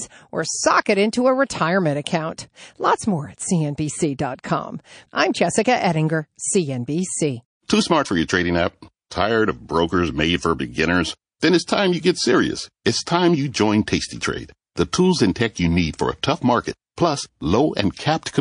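Across the whole speech clip the sound has a watery, swirling quality, with sibilants turning metallic and chirpy and consonant onsets smeared. This is likely MP3 compression at a starved bitrate, consistent with roughly 40 kbps. With too few bits, the encoder zeroes quieter frequency lines that then flicker on and off between frames, producing the plainly audible swirl and chirps.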